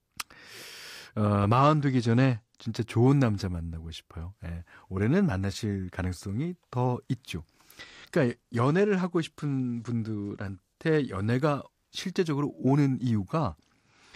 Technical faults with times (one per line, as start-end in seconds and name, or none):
1.58-2.62 Bluetooth SBC bit pool drop
7.80-11.31 Bluetooth SBC bit pool drop
13.40-14.15 Bluetooth SBC bit pool drop